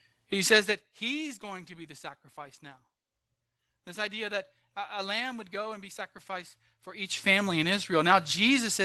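Nothing is technically wrong with this speech clip.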